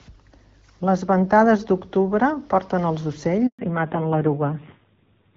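Speech, carried over an HD Voice call, is cut by a handover gap at 3.47 s. The phone moves the call to another network here. No speech frames arrive during the switch. The sound dies within a few tens of milliseconds and stays silent for 120 ms, until 3.59 s. Whatever was said in that window is lost, not just quieted. Before the gap, the AMR wideband codec sounds clear, with only light coding damage, which fits a rate of around 12.65 kbit/s. From 3.59 s to the end there is a fallback to narrowband. The new link uses an older narrowband codec. Nothing above 4 kHz remains. The sound turns duller and muffled, and it also grows rougher. That roughness points to a low AMR narrowband rate, near 5.9 kbit/s. The band loss and the roughness both start right at the handover and last to the end.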